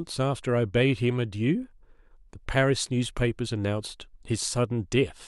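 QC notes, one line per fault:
Nothing to flag on this one; I can't hear any technical faults anywhere in the speech.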